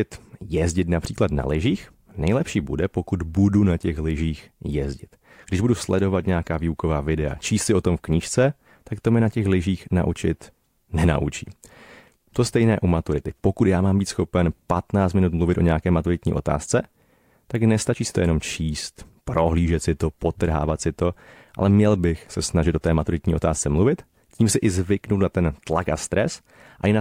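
No technical fault can be heard anywhere in this speech recording. Nothing in it calls for a timestamp or a repair.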